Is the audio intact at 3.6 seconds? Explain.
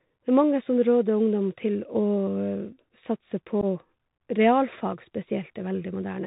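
No. Between 3.61 and 3.65 s the speech drops into a short, hard-edged hole, about 15 ms of missing signal, with an abrupt edge that can click. When the speech resumes it sounds briefly quieter before recovering. This is unconcealed Bluetooth headset packet loss. A few of the tiny voice packets passing between headset and phone never arrived, and silence or an idle pattern was played in their place. On this kind of link the adaptive step size has to rebuild after the gap, which causes the momentary dip in level.

Around that moment, and throughout, the sound is narrowband and gritty. Nothing above 4 kHz survives, sibilants turn scratchy, and a granular hiss sits under the speech. This is the Bluetooth CVSD headset codec, which fits a 64 kbps CVSD link. Each sample is coded as a single up-or-down bit with an adapting step, so loud high-frequency sounds outrun the step and distort.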